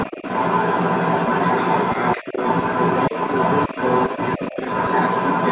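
From the start to the end at 5.5 s, a second voice runs underneath the talker. It is the other side's voice leaking through, likely because the device's loudspeaker fed the microphone and the echo canceller left a residue. It sits about 5 dB above the main speech, band-limited. It is a separate talker present throughout, not a change in the main voice's own level or tone.

Because that second voice is present while the talker speaks, the main speech is pulled down in short patches: 2.16 to 2.37 s by about 15 dB, 3.73 to 3.78 s by about 10 dB, 4.09 to 4.13 s and 4.38 to 4.56 s by about 5 dB. This is speech suppressed in double talk, likely the echo canceller ducking both sides when it could not separate them. The talker's level sinks and recovers in step with the overlap, rather than dropping to digital silence or glitching as packet loss would. Throughout, nothing sounds above 4 kHz, which fits narrowband G.711 coding on the call path.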